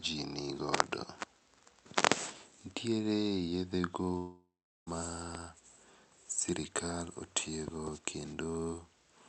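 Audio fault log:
4.17–4.89 s, long network dropout: Right after "yedhe go", about 0.7 s of audio likely never reached the receiver. The receiver stretched the last sound into a fading buzz, leaving about 0.4 s of near-silence, and the sound resumes later with that stretch missing.
5.35–5.37 s and 7.68–7.90 s, loud pop: A sudden voltage step, likely from a plug, switch, static or driver glitch, entered the signal. It is heard as a sharp pop at 5.35 s and a double pop near 7.68 s, each roughly 10 dB above the sound, which continues underneath.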